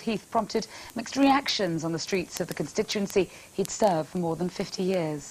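An unlocked digital link, read against a clock several hundred parts per million off, misreads one sample at each slip, causing word clock ticks roughly every 40 ms from 0.13 to 5.27 s.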